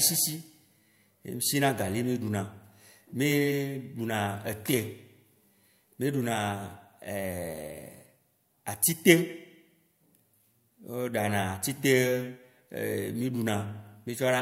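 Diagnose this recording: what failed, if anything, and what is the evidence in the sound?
Nothing failed: no stage between capture and playback leaves any audible evidence of a fault anywhere in the recording.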